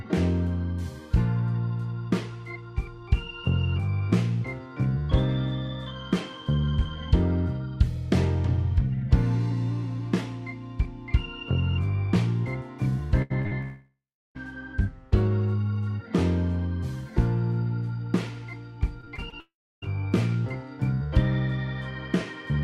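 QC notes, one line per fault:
13.22–13.32 s, burst of packet loss: about 80 ms of consecutive packets failed to arrive in time. The receiver extended the last sound across the hole while fading it down, so a short held buzz or dying hiss replaces the audio before it picks up again with that stretch missing.
13.42–13.53 s, short concealed packet loss (two in a row): about 20 ms and then about 40 ms never reached the decoder in time. Each hole was filled by continuing the preceding sound and blending back into the real signal, heard as a brief smear or wobble.
13.61–14.37 s, long network dropout: the sound carries on as a decaying buzz or hiss, then drops to silence for about 0.36 s. The likely cause is that no packets arrived for roughly three-quarters of a second. When audio returns, the intervening 0.74 s is gone.
19.01–19.34 s, repeated packet loss (robotic sound): four separate holes opened in quick succession, the longest 21 ms. 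Each was patched by extending the last sound, and about 22 percent of this stretch is filled-in material. The result is choppy audio with fragments missing.
19.40–19.84 s, long network dropout: a fading tail of the last sound gives way to about 0.31 s of silence. The likely cause is a stall in packet delivery lasting over 0.4 s. The audio resumes further on, and roughly 0.42 s of it is never heard.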